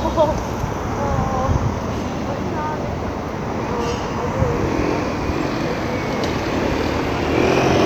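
There are no technical faults to describe in time order anywhere in this recording of sounds.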